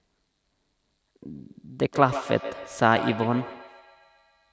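Feedback echo between two devices starts at 1.29 s and runs to the end: a second device in the room plays the speech back into the microphone, whose echo canceller cannot remove it, so each sound returns roughly every 150 ms, thin and ringing, about 12 dB below the speech.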